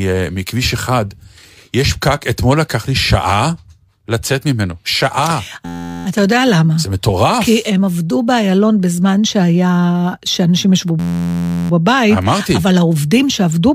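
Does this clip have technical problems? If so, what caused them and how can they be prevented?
Yes. A system hang loop occurs twice, from 5.65 to 6.06 s and from 11.00 to 11.70 s. Each time, the computer or driver stalled while the sound hardware kept replaying the same 11.61 ms slice of its ring buffer, which fits a 512-sample buffer. That slice repeats exactly, turning the speech into a steady buzz at about 86 Hz. Little or no audio is lost when playback resumes. Giving the audio thread real-time priority and fixing the driver or system stall would prevent it.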